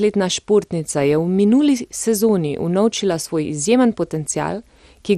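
From start to finish the speech sounds dull and has a gurgling, granular edge. Nothing comes through above 14.2 kHz, and what remains is grainy. That's likely MP2 compression. Layer II divides the signal into 32 sub-bands and shares out a limited pool of bits, so the top bands get shut off and the surviving ones are quantised coarsely. The damage is plainly audible here, which fits a low bitrate of around 64 kbps.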